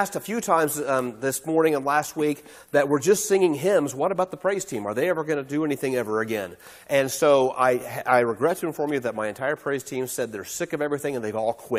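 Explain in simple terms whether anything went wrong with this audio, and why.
Nothing went wrong here: the recording comes through steady and intact, with no technical faults anywhere along the way.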